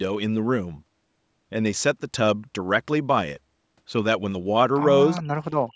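Speech recording with two call faults. From 5.15 to 5.23 s a faint, delayed copy of the voice surfaces, well below the main speech and lagging about 0.41 s, most likely an echo leak where the far end's echo canceller let loudspeaker pickup through. From 5.44 s to the end the voice sinks sharply, by roughly 40 dB at its deepest, the likely result of speech suppressed in double talk as the canceller ducked everything while both sides spoke. The call microphone processing leaves nothing above 8 kHz.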